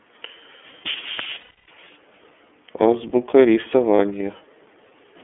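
From the start the speech runs through the iLBC codec, confined to a telephone band of roughly 250 Hz to 3.4 kHz. Its plainly audible rough, slightly synthetic edge fits the 13.33 kbps mode with 30 ms frames. Unlike muffling from a simple low-pass filter, the texture itself sounds coded.

From 1.41 to 1.68 s, lost iLBC frames leave about 270 ms as a held, buzzy vowel fading into breathy noise. A second, 30 ms loss falls at 3.96 s. Unlike dropouts or stutters, no silence or repeated syllable occurs, and the speech recovers almost immediately.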